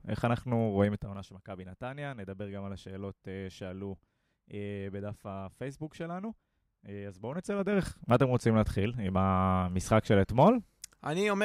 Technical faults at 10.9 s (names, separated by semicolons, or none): none